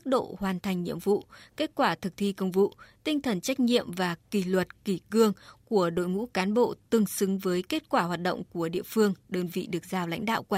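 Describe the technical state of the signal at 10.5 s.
At 10.5 s the speech signal is intact, with no dropout, distortion or other fault audible at that moment.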